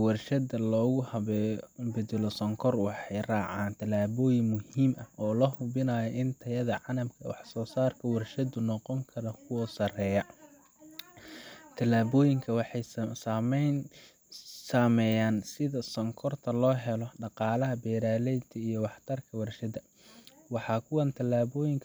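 No technical faults can be heard anywhere here.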